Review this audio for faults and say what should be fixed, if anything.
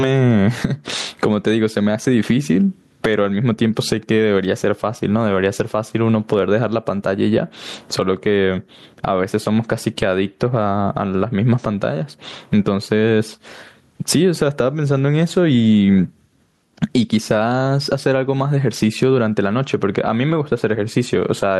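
Gain pumping runs throughout: the gain is pulled down by around 20 dB under each loud syllable, squashing loud and soft parts closer in level, likely from excessive input gain driving a fast limiter. Set the microphone gain lower so the limiter rarely engages, and use slower attack and release times.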